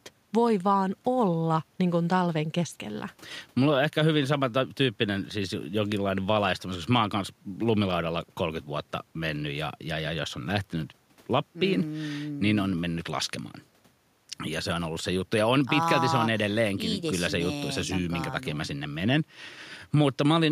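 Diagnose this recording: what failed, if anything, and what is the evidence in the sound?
No fault found in this recording.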